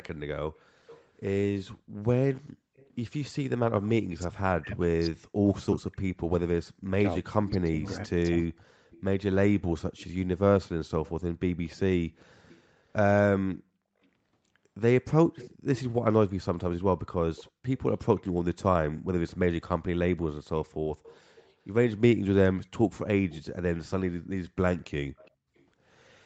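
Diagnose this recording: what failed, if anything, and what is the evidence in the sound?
Echo leak at 0.58–1.07, 2.76–2.95, 7.3–15.8, 17.36–18.62, 21.04–21.53, 23.29–23.43 and 25.17–25.63 s. A faint copy of the speech, about 20 to 30 dB down, trails by 391 to 408 ms, the lag creeping upward. The cause is likely a loudspeaker echo the call's canceller failed to remove.

Speech suppressed in double talk, 3.6 to 8.77 s. The speech repeatedly dips, at worst by around 40 dB, for roughly four seconds in total, overlapping the long echo stretch. This is call processing: the echo canceller likely could not separate near talker from echo, so it attenuated both.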